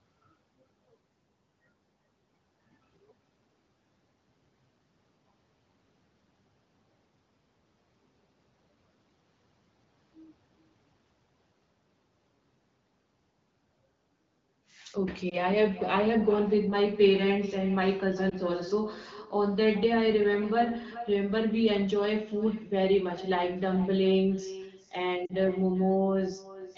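Throughout the speech there is echo with no canceller. A far-end loudspeaker feeds the microphone and nothing removes it, so the talker's phrases return roughly 400 ms later as a thinner copy about 17 dB below the direct speech.

Lost AMR speech frames occur at 15.29–15.36 s and 18.29–18.35 s as brief warbling dips, each consistent with one 20 ms frame concealed. At 25.26–25.33 s the smear is longer, suggesting two frames. The wideband decoder repeats its last parameters at falling gain, and the sound briefly roughens before recovering.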